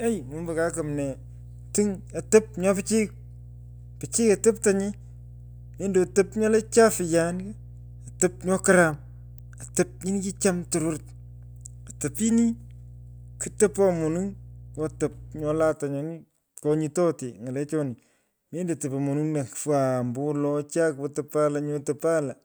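A steady low tone sits under the speech from the very start of the clip until about 15.7 s, then stops while the talking carries on. This is mains hum at 60 Hz, roughly 20 dB below the speech. It comes from the power line leaking into the signal path, through a ground loop between connected equipment or a transformer close to the cabling. After the hum drops out at 15.7 s, the speech continues without it.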